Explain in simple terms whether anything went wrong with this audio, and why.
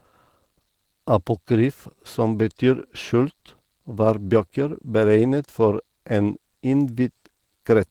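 From start to finish the speech sounds rough, slightly hoarse and a little robotic. That is Opus voice compression squeezed to a low data rate. It models the voice coarsely, rebuilding the main part by prediction and coding only a thin layer for the highest sounds.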